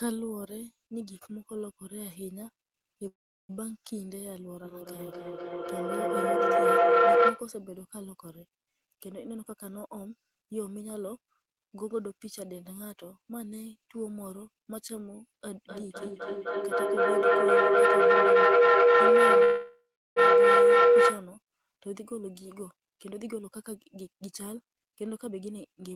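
Speech, marred by two call audio freezes, two bouts of feedback howl and two stretches of jitter buffer speed-up. At 3.07 to 3.52 s and again at 19.44 to 20.19 s the sound stalls. The last sound is stretched into a fading buzz that falls to silence for roughly 0.37 s and 0.36 s, then resumes where it stopped, with nothing lost. This is likely packets held up in transit and the jitter buffer running dry. The inserted 0.42 s and 0.72 s show as a smeared, decaying tail and then a flat blank gap in the waveform. The feedback howl runs from 4.65 to 7.55 s and from 15.57 to 21.34 s, the second overlapping the later freeze. Two devices in one room are feeding a loop that gains level each trip, so repeats swell into a tone near 500 Hz, about 16 and 17 dB above the speech. On a spectrogram it is a bright horizontal line around 500 Hz, with a loop delay of roughly 300 ms. At 9.30 to 12.54 s and 21.93 to 25.91 s the jitter buffer speed-up trims short pitch-period slices to shed excess delay, about 0.4 s and 0.7 s in total. 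The speech runs 13% and 15% fast at unchanged pitch and sounds hurried, with syllables packed more tightly along the waveform.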